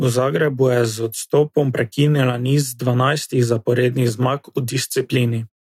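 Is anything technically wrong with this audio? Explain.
No, nothing technically wrong stood out on listening to this speech clip.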